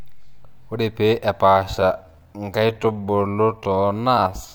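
From 1.55 s to the end, the speech abruptly slows to about 0.66 times its pace while the pitch stays put, which marks it as a time-stretched section rather than a slowed recording. It is likely software padding the audio to a longer length by repeating short pieces, which makes it drag.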